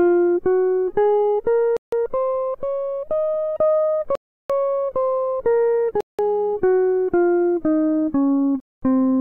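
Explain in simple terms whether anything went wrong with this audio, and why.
The music drops out to dead silence four times and then carries on: at 1.77 to 1.92 s (about 0.16 s), 4.15 to 4.50 s (about 0.34 s), 6.01 to 6.19 s (about 0.18 s) and 8.60 to 8.83 s (about 0.22 s). This is likely a Bluetooth stall. Radio interference delayed the wireless audio, the headphones ran out of stored sound and went quiet until the missing pieces were sent again.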